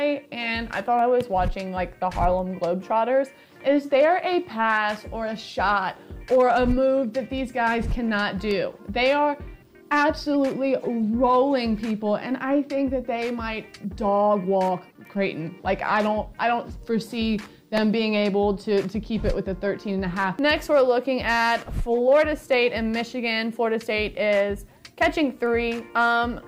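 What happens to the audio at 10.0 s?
Nothing goes wrong at 10.0 s; the audio plays through that moment intact, with no dropout, click or distortion.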